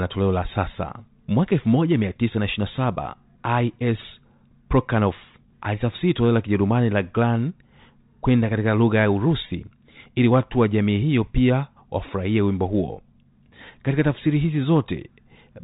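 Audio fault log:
No faults are present in the speech. The G.711 telephone coding path is audible as a narrow telephone band with nothing above 3.8 kHz.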